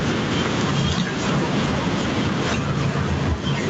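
Gain pumping runs through the whole speech clip, with the level swinging around 5 dB, leaving loud and soft parts closer in level. This is likely a fast limiter reacting to gain set too high. The waveform envelope looks flattened, while the spectrogram is empty above 8 kHz.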